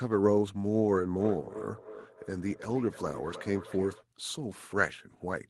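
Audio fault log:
1.19–4.05 s, feedback echo between two devices: the speech returns about every third of a second, peaking about 14 dB below the direct sound. A second device in the room replays the call into this microphone, and this device's echo canceller cannot remove that sound.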